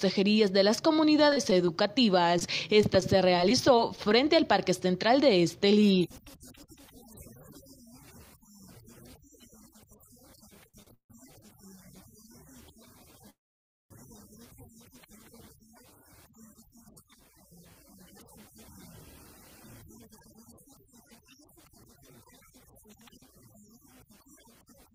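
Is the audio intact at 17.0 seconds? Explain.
No. A jitter buffer speed-up runs from 16.02 to 17.02 s: short pitch-period slices, about 70 ms in total, are cut, so sound plays 107% fast at unchanged pitch.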